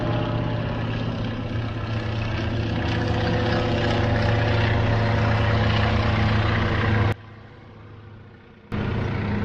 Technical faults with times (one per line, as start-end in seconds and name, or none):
7.12-8.72 one channel inverted